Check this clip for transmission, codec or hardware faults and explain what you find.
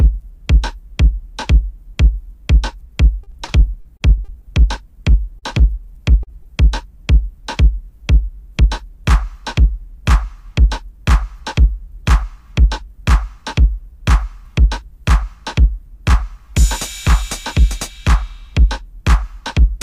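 Three kinds of network fault affect the clip, all clustered between about 3 and 6.5 seconds.

From 3.23 to 4.45 s there is repeated packet loss, which gives a robotic sound. Packets went missing seven times in quick succession, the longest gap 39 ms, and the receiver each time extended the preceding audio to cover the hole. Roughly 16% of that stretch is patched material rather than real signal. The result is choppy audio with small pieces dropped out.

Short concealed packet loss occurs twice, at 5.39 to 5.45 s and at 6.23 to 6.30 s. Each time about 40 ms of data failed to reach the decoder. It synthesised 30 ms and 36 ms of filler from the last received sound before blending back in. Each is heard as a brief smear or wobble, where a short transient can disappear.

At 6.43 to 6.48 s there is a short stall from a late packet. The jitter buffer emptied when a packet arrived 22 ms late, so the receiver held the last sound until it came, then resumed without losing anything. 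The effect is a sound lingering slightly too long, with a faint buzz or dip.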